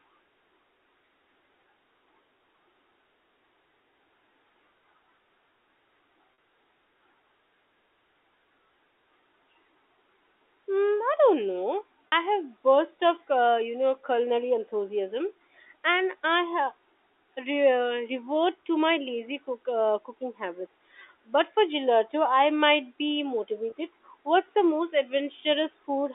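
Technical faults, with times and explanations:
6.34 s, 12.08 to 12.12 s and 23.70 to 23.72 s, packet loss with pitch repetition: audio went missing in transit, about 40 ms at the first two points (consistent with two 20 ms packets each) and 20 ms at the third. The receiver filled each gap by repeating the last pitch period, so the sound briefly freezes into a held, slightly buzzy tone before resuming, heard against the narrow 300 Hz to 3.6 kHz telephone band.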